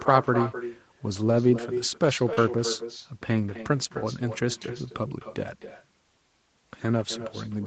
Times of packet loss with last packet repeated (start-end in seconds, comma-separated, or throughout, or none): none